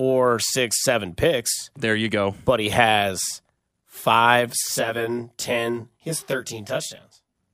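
From 4.63 to 7.36 s, channel delay (comb filtering): one channel lags by around 20 ms, and the mono sum cancels evenly spaced frequencies from around 30 Hz, leaving the speech rough and slightly doubled.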